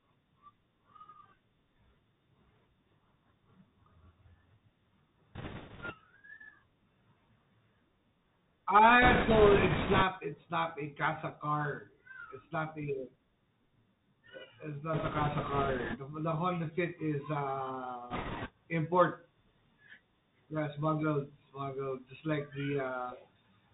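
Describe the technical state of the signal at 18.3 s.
At 18.3 s the sound is carried by a Bluetooth CVSD headset codec, with a burst of bit errors on the Bluetooth voice link on top. The codec runs through the whole clip. It codes each sample as a single up-or-down bit with a step that adapts, a one-bit stream that fits 64 kbps. Nothing above about 4 kHz survives, s sounds come out scratchy, and a granular hiss sits under the speech. That steady, step-limited roughness sets it apart from a generic low-bitrate codec's swirling or metallic artefacts.

From 18.1 to 18.5 s, flipped bits add a rushing, crackly noise, with an error rate of roughly 7 percent. Because every CVSD bit nudges the waveform by only one small step, and the adapting step lets each error fade, the damage smears into a noisy wash rather than the sharp, loud clicks or dropouts heard when a packet is lost. That diffuse, hissing crackle is what separates it from packet-loss glitches.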